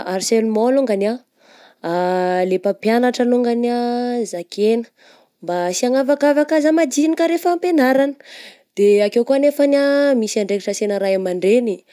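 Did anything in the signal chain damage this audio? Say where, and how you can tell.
No, nothing in the signal chain damaged this audio.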